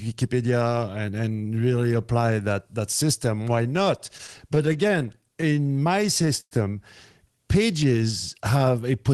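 Repeated stalls (stutter) run through this speech clip from 3.63 to 6.53 s, starting just after "that that system why". Packets arrived too late, so the jitter buffer ran dry about 21 times, with gaps up to 108 ms filled by stretching the last sound. Nothing is lost, but the speech drags and stutters.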